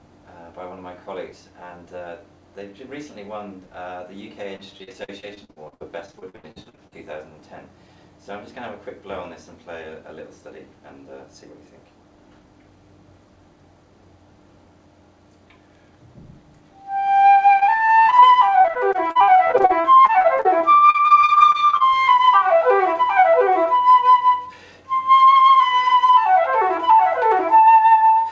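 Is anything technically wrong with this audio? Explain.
Yes. Repeated packet loss (robotic sound) occurs twice, from 4.56 to 6.94 s and again from 17.60 to 21.94 s. In both stretches the audio turns choppy, with pieces dropping out in quick succession. Packets were lost or arrived late over and over, and each hole was patched by extending the last fragment of sound. The first stretch has longer holes, up to 78 ms, with about 31% of it patched. The second stretch has shorter holes, none over 41 ms, but more of them, and about 21% is patched. The call path's codec cuts everything above 8 kHz, which fits G.722.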